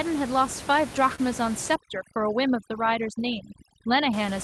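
At 1.15 to 1.20 s there is a short concealed packet loss. About 20 ms of the call's audio missed the decoder, and the receiver filled roughly 24 ms by extending the preceding sound before blending back into the real signal. It is heard as a brief smear or wobble in the speech.

From 1.75 s to 4.13 s overdone noise removal sets in. The room noise sits about 14 dB below the speech, and the suppressor cuts individual frequency bands hard wherever they approach its noise estimate. The background drops and breaks up into twinkling specks, and the quieter parts of the voice are removed along with it.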